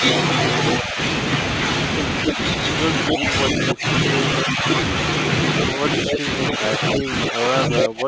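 The speech dips slightly at 0.83 to 0.98 s and 2.28 to 2.38 s, dips again at 4.42 to 4.64 s, and sinks by about 20 dB at 3.11 to 3.86 s. From 5.77 s to the end it is pushed down by up to about 25 dB. This is speech suppressed in double talk, likely caused by the echo canceller ducking the near talker while the far side spoke. Brief delayed repeats of the voice, roughly as loud as the speech itself, appear at 2.27 to 2.32 s, 3.09 to 3.16 s and 6.1 to 6.18 s. Each trails the original by about 280 ms. This is echo leak, likely caused by loudspeaker pickup that the far end's canceller failed to remove.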